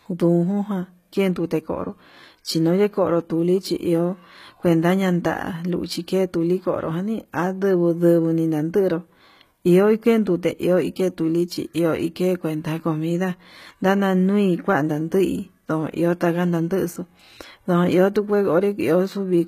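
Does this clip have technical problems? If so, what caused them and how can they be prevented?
Yes, throughout: gritty, metallic sibilance and a hard cutoff near 14.9 kHz point to likely HE-AAC compression, with replicated treble at what sounds like roughly 20 kbps. Encode at a higher bitrate or use plain AAC.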